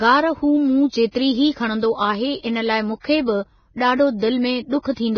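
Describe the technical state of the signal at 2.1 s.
At 2.1 s, as throughout the clip, the speech shows likely Vorbis compression, with the sound pointing to roughly 16 kbps. Nothing survives above 6.5 kHz, and the treble below that is quantised into grainy hiss of similar energy, unlike a plain low-pass, which would sound dull but clean.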